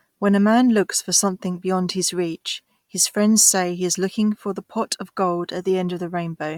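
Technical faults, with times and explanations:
Throughout, Bluetooth LC3 compression: the speech has a clearly audible breathy, grainy edge, with the top end sounding thin and hissy rather than clean. That's likely the LE Audio codec working at a modest rate, which fits around 48 kbps with 10 ms frames. Much of the upper spectrum gets zeroed and replaced with filler noise, so the fine detail up there turns to fizz.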